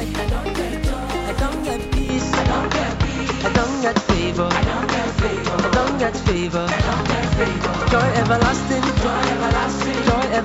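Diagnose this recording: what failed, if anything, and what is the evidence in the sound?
At 2.09 s the sound turns duller with no gap. The spectrogram's top band stops abruptly at 7.6 kHz, a new noise floor appears well below the signal, and the waveform shifts modestly in level. An input switched to a poorer device at the capture stage is the likely cause.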